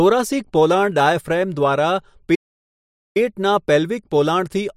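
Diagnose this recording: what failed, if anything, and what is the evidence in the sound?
A playback stall at the playback stage silences the speech from 2.34 to 3.17 s, about 805 ms, likely because the player ran short of data or was blocked.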